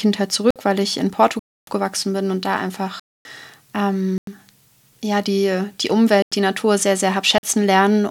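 A block of digital silence replaces the speech six times, with samples swapped for zeros and no fade: at 0.51 s (52 ms), 1.39 s (279 ms), 3.00 s (255 ms), 4.18 s (93 ms), 6.22 s (93 ms) and 7.38 s (48 ms). The two identical 93 ms gaps fit an unfilled 4096-sample output buffer. Each cut and return is abrupt. The quarter-second gaps come across as clear holes.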